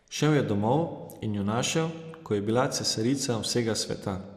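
The speech was likely squeezed through an MPEG Layer II (MP2) encoder at a rate low enough to starve its sub-bands of bits, plausibly around 80 kbps. Throughout, upper bands drop out and flicker, leaving a dull tone with plainly audible gurgling, granular distortion.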